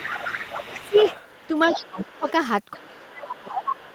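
From 0 to 1.48 s, 1.66 to 2.32 s and 2.72 to 3.78 s, a second, quieter voice sits about 10 dB under the talker. This is the other side's voice leaking through, likely loudspeaker echo that the echo canceller left in the microphone signal. Where that voice overlaps the talker, at 0.76 to 0.96 s, 1.68 to 2.26 s and from 2.77 s to the end, the talker dips by about 15, then 20, then 25 dB. This is speech suppressed in double talk, likely the canceller turning both voices down because it could not separate them.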